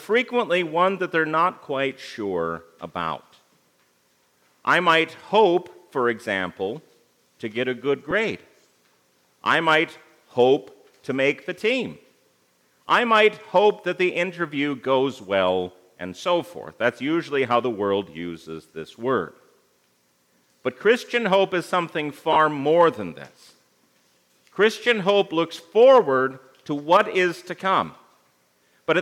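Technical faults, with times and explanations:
8.11 s and 22.33 to 22.36 s, lost LE Audio frames. Gaps of 10 ms and 30 ms were refilled by repeating the last spectrum with random signs. Tones briefly smear into noise.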